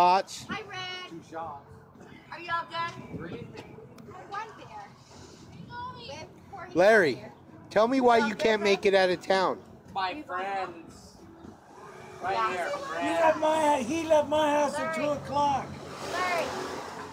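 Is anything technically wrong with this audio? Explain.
No, nothing in this audio points to a technical problem. There is no fault to explain here.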